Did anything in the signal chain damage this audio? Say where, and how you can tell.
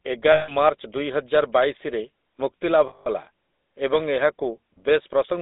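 Yes. At the codec stage, GSM full-rate coding runs throughout. Speech sounds buzzy and gravelly, limited to 250 Hz to 3.7 kHz, which fits a 13 kbps stream.

At the network stage, lost GSM frames hit at 0.32 to 0.53 s and 2.88 to 3.08 s. Sound holds as a metallic ring where the decoder repeats its last good frame.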